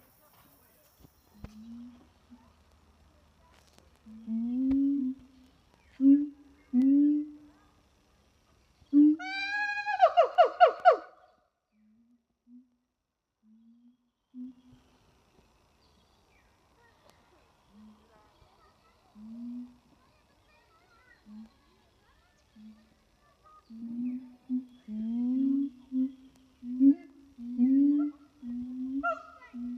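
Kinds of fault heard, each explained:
Zipper noise: the level moves in unsmoothed 1 dB steps, each leaving a small click, so a ticking zip rides on the sound. It falls by around 20 dB from 10.91 to 11.57 s and climbs back from 14.14 to 14.79 s, at roughly 30 steps a second.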